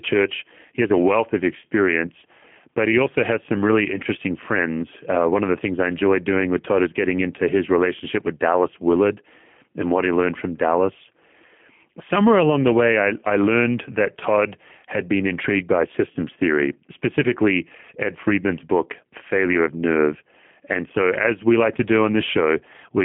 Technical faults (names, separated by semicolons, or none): G.729 codec; VoIP packet loss concealed by the speech codec